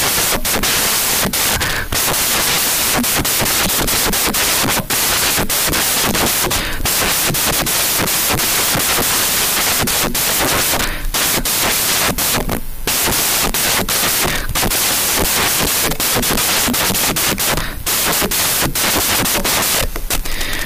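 From start to finish, the speech is buried under loud white noise: samples built from the wrong bytes, with low-order bits promoted to the high part of each value. The waveform looks like a dense slab, the spectrogram a broadband wash throughout.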